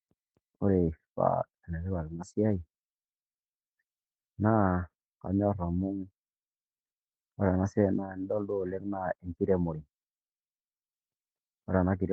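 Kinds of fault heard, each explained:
No technical faults are audible anywhere in the speech recording.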